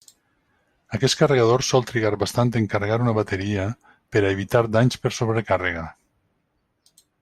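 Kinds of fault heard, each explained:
Nothing stood out as a fault on listening to this speech recording.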